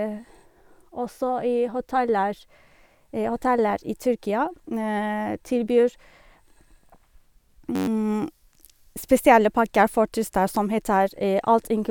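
A system hang loop runs from 7.76 to 7.87 s. The playback system stalled while the sound hardware kept cycling through its ring buffer, so a single 10.67 ms slice of the speech repeats exactly 11 times. That slice length fits a 512-sample buffer. Because the loop is so short, it comes out as a steady buzz at about 94 Hz rather than a stutter, and roughly a tenth of a second of the real audio is lost beneath it.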